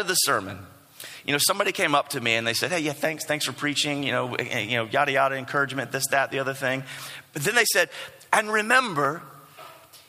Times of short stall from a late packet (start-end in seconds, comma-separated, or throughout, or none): none